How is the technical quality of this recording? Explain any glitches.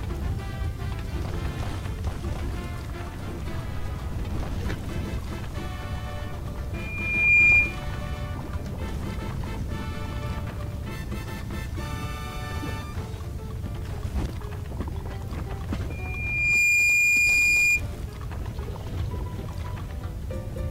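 The recording has two bursts of loudspeaker feedback squeal, at 6.74–7.80 s and 15.90–17.82 s. Both are a 2.4 kHz tone swelling over under a second until it sits well above the sound. The microphone is re-amplifying its own loudspeaker. The gradual swell separates it from a steady interfering whistle.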